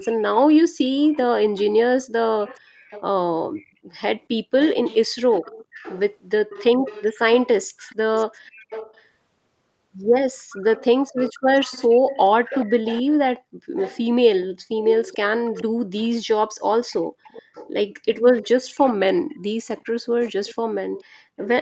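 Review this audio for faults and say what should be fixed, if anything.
Echo leak shows up at 1.13–3.02, 3.56–9.05, 10.5–13.13, 13.76–16.09, 16.89–17.7 and 18.33–21.48 s: a faint copy trailing 431 ms behind, about 15 to 25 dB down. That's likely a loudspeaker echo canceller letting residue back. Switching that end to headphones or retuning its canceller would stop it.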